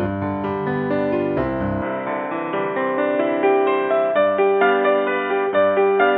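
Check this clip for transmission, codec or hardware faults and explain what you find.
One hardware-side fault stands out: from 1.82 s to the end, the sound behaves as if the input switched to a poorer device, most likely a change to another microphone or a headset's call profile partway through. That device passes a narrower band, so nothing above 3.8 kHz survives and the sound turns dull and boxy at once. There is no gap at the switch and the level stays about the same, but a faint new noise floor, roughly 55 dB down, comes in with it.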